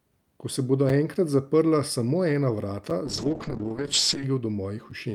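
At 0.89 s there's the first gap between chunks: a hard-edged hole of about 6.5 ms where the chunks join and silence got left in. Another lands at 2.90 s and a third at 4.91 s, so they repeat every 2.0 s.

From 3.07 s to 4.31 s a call bitrate drop makes the speech turn rough and watery. That fits the encoder being cut from around 48 kbps to about 7 kbps, staying at the bottom for roughly 1.2 s before recovering.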